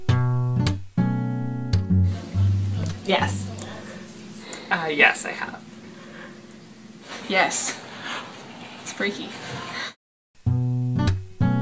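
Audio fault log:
No faults detected.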